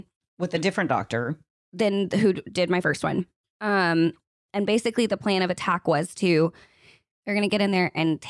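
Speech with no audible faults.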